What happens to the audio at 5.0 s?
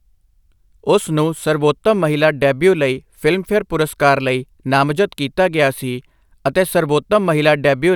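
At 5.0 s the speech carries on cleanly, with no dropout, click, distortion or other audible fault at that moment.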